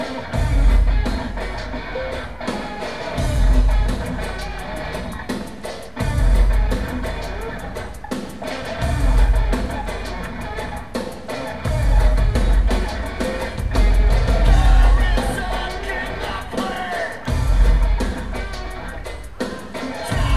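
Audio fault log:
No faults can be heard anywhere in the audio. Nothing in the sound points to trouble in the signal path.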